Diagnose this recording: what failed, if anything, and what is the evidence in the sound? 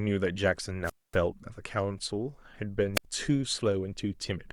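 The wireless link dropped out twice: a wireless microphone squelch dropout, upstream in the analogue RF path. The speech goes near-silent from 0.83 to 1.17 s, with about 240 ms fully muted, and again from 2.94 to 3.05 s, muting for about 74 ms. Each time, the FM signal faded enough that the receiver's squelch cut the output.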